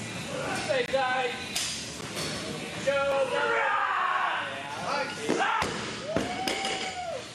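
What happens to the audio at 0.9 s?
A short hole in the sound, from 0.86 to 0.88 s: a 20 ms block of digital silence. The sound cuts out abruptly and returns with no fade, the kind of gap left when an output buffer isn't filled in time.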